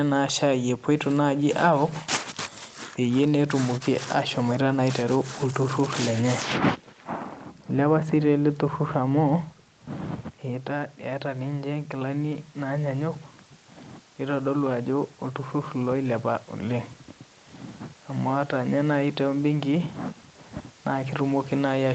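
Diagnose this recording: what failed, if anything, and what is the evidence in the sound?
Automatic gain rising in call processing: the talker dropped off-mic around 10 s, so the AGC ramped up, lifting voice and room noise about 5 dB from 10.48 to 13.23 s.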